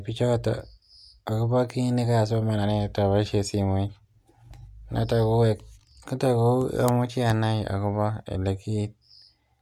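No technical faults can be heard in this speech recording.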